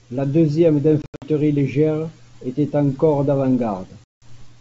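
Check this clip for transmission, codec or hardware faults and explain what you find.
Packet loss on an ADPCM call breaks the audio twice. From 1.02 to 1.28 s, about 160 ms of audio drops out in several hard-edged gaps spread over 200 ms, the longest about 80 ms, just before "légère était encore". From 4.04 to 4.24 s, 180 ms of audio, roughly ten packets, vanishes. Each lost packet becomes silence, so the receiving decoder's adaptive predictor and step size drift away from the sender's. When the sound resumes, it comes back slightly distorted, until the two sides realign within some tens of milliseconds. Underneath, the G.722 wideband coding, consistent with 64 kbit/s, stays clear up to 7 kHz.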